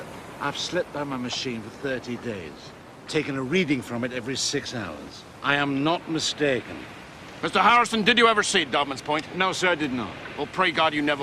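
At 7.7 s the audio has a short burst of DAB burbling. A bit error rate of about 0.15% slipped past error correction and put short blips of noise in single sub-bands.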